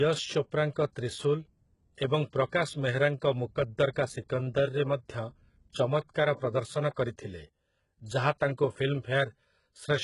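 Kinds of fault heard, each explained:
HE-AAC compression: throughout the speech, the treble sounds synthetic rather than natural, with heavy damage and nothing above 11.1 kHz, which fits a very low bitrate near 12 kbps. The likely cause is a codec that codes only the lower spectrum and rebuilds the top by copying lower bands upward under a coarse envelope. The rebuilt harmonics don't line up with those beneath, so s sounds come out gritty and metallic.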